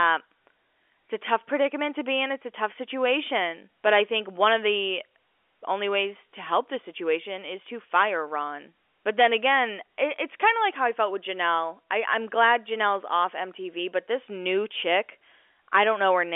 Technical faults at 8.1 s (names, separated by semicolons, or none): none